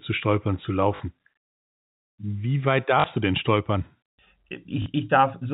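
At 0.96 s, 3.00 s and 4.82 s, 40 ms of speech drops out and the last packet is repeated, consistent with two lost 20 ms packets, producing brief, buzzy robotic stutters over the band-limited G.711 telephone sound.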